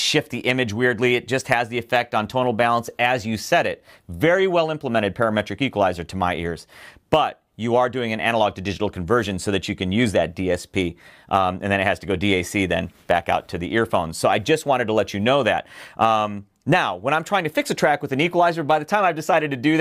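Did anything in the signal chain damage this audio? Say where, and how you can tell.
No, nothing along the signal chain has left an audible mark on this audio, and its continuity holds throughout.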